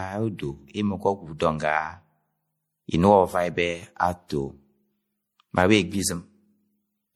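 Generation loss runs throughout the speech, from start to finish. The sound is swirly and hollow, with smeared consonant attacks and a watery texture that seems heavier than a single lossy encode would leave. This is likely repeated lossy re-encoding, something like four passes, with a character that fits MP3 at around 64 kbit/s. Each pass requantises on a shifted frame grid, so spectral holes and noise pile up on one another.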